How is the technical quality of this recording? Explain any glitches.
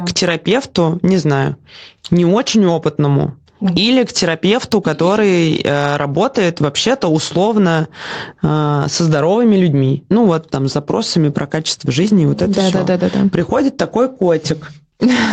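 The recording has one fault, gain pumping, running through the whole clip. It reaches us over a call path that leaves nothing above 8 kHz, which fits a wideband Opus stream at a modest bitrate.

Gain pumping, from start to end: the input gain is likely set far too high, so a fast limiter clamps down on each loud syllable and lets go in the pauses. The gain swings by around 15 dB, bringing loud and soft parts closer in level. The waveform looks flattened, with peaks at a near-constant ceiling.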